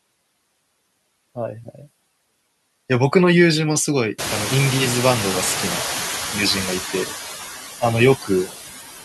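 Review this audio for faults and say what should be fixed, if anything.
Throughout, the background dips between phrases and swells back under the speech. These are noise suppressor artifacts from cutting steady noise by about 19 dB per frame. Use a gentler suppression depth, and lower the room noise at its source, since it jumps by about 24 dB around 4 s.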